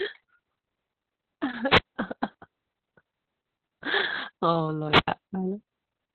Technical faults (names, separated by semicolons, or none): Opus voice compression; wireless microphone squelch dropout